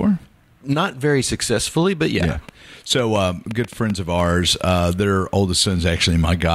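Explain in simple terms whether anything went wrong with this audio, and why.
Something did go wrong. Between 2.23 and 4.21 s there's a train of clicks: around ten sharp ticks landing roughly four times a second, at an uneven pace, and they sit on top of the speech, even in the gaps. They all sound much alike, which points to something outside the recording itself, likely electrical interference from nearby gear or a faulty connection or power supply.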